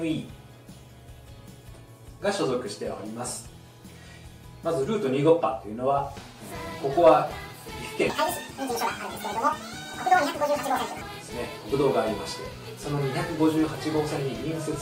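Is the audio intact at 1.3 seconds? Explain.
Yes, the audio is intact at 1.3 seconds, with no dropout, click, distortion or other fault at that point.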